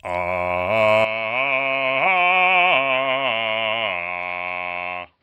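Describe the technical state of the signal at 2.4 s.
At 2.4 s the music sits inside a stretch from 1.05 to 5.23 s where the input has likely switched to a poorer device. Nothing passes above 5.5 kHz, so the sound turns dull. The level drops about 10 dB, and a faint new noise floor appears. The change comes with no gap.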